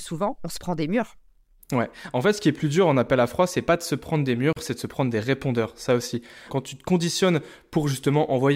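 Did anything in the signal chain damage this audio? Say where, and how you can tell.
Yes. There's a gap at a join of encoded pieces at 4.53 to 4.56 s in the speech, about 37 ms long, after which the speech picks up right where it left off. That's the codec stage. The audio was encoded in separate pieces, on a 6 s spacing, and stitched together untrimmed, so each piece's leading encoder delay and padded final frame stayed in. The codec softens the edges, so the truly silent stretch is shorter than the full gap.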